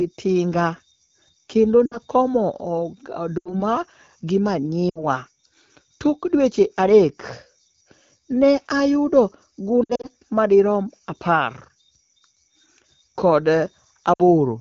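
Lost AMR speech frames break up the speech at 1.86–1.97 s, 3.38–3.62 s, 4.89–5.04 s, 9.83–10.08 s and 14.13–14.23 s. Radio errors corrupted frames, so the decoder repeated the last good pitch and vocal-tract settings at falling gain. Each gap drops quickly to near silence, which fits runs of three or four 20 ms frames. The one near 10 s is scattered, with lost frames spread over about 0.2 s. Unlike a dropout, the sound fades rather than cutting off abruptly.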